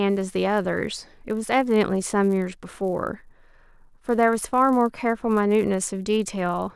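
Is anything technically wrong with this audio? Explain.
Yes. The speech carries a resampler restarted on every block, present throughout. The converter processed each 10 ms block in isolation, so at every block boundary its filter had silence or the wrong end of the block in place of the real neighbouring samples, leaving a small error at each edge. The result is a buzz at 100 Hz, the block rate, audible only while there is signal. This fits a 48 kHz to 24 kHz conversion.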